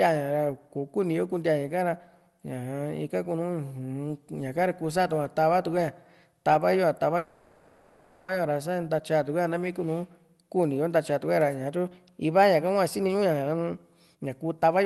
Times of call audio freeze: 7.17-8.30

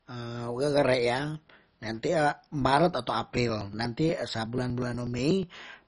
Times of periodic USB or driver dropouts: 3.37-5.79

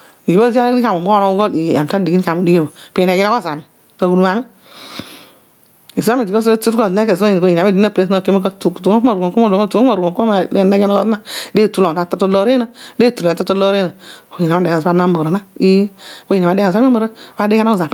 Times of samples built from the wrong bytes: none

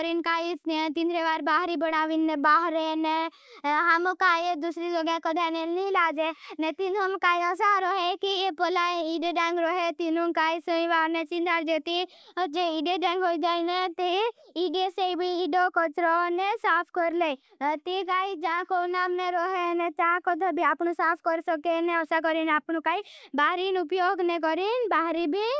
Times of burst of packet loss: none

